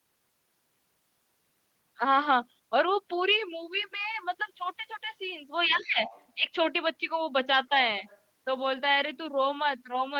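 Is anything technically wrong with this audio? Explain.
Yes. Other side's voice leaking through occurs at 5.66–5.87 s, 6.04–6.27 s and 8.06–8.2 s: a faint second voice, about 20 to 30 dB below the talker, likely residual loudspeaker echo the canceller missed. On a spectrogram it appears as weak, separate harmonic traces.

Speech suppressed in double talk spans 5.67–6.01 s, overlapping that echo. The talker's level drops by up to about 15 dB for roughly a third of a second, likely the canceller attenuating everything while both sides overlapped. The waveform envelope visibly sags.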